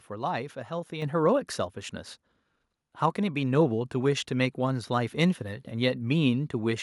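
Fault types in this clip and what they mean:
microphone volume stepped up: the call software bumped the mic input gain in one go, so at 1.02 s the speech and background both jump about 6 dB louder together.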